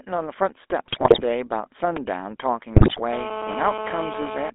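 The whole clip has gone through the GSM full-rate codec, and you can plainly hear it. The band is squeezed to roughly 300 Hz to 3.6 kHz, and the sparse pulse excitation gives the speech that buzzy, gravelly edge. The sound fits the 13 kb/s full-rate coder.

From 0.88 to 1.23 s, GSM bit errors kick in. Corrupted filter, pitch and gain values reach the decoder, so frames come out with a warped spectrum or jumped level, and the speech breaks into squawks and gargling. The same thing returns from 2.74 to 3.01 s, with a heavier error rate there, around 9% against roughly 4% the first time.

At about 1.97 s there's a repeated buffer. The next chunk of audio arrived late, so the device replayed the last one twice more. The piece is tiny, consistent with a 128-sample buffer of about 3 ms, so rather than a stutter you get a quick click with a hint of buzz.

From 3.13 s to 4.5 s a GSM phone buzz sits under everything. 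A nearby 2G handset on a call is bursting 217 times a second, and the audio circuitry rectifies those pulses. The result is a steady, raspy 217 Hz buzz full of harmonics, only about 7 dB below the speech.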